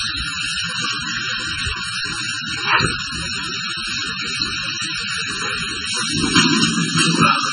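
From start to finish the sound is hollow and phasey, with a slightly tubular colour that never changes. Fixed notches sit in the spectrum, the first near 700 Hz and the rest evenly spaced above it. That pattern is channel delay (comb filtering): one channel runs late by roughly 0.7 ms, and when the two are summed to mono, whatever they share cancels at those regularly spaced frequencies.

Also throughout, the top end stops dead, with nothing above 10.1 kHz. What remains has a watery, swirling texture, with faint components flickering in and out, a metallic edge on bright, noisy detail, and attacks that smear rather than snap. The cause is likely heavy MP3 compression. The encoder cuts the treble at a fixed point and drops weaker spectral lines from frame to frame, and damage this severe points to a very low bitrate, around 16 kbps.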